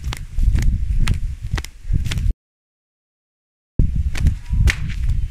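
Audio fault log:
2.31–3.80 s, audio dropout to silence: the sound breaks off mid-flow at 2.31 s and the next 1.49 s is dead silence, with no room tone or noise floor underneath, before the audio resumes abruptly at 3.80 s. That total absence of background means the input signal itself vanished while recording continued, writing silence in its place, most likely from a momentary disconnection or mute upstream. Whatever sounded during that stretch is lost.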